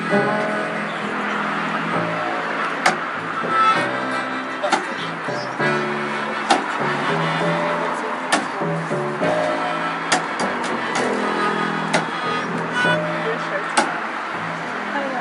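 No technical faults are audible anywhere in the recording.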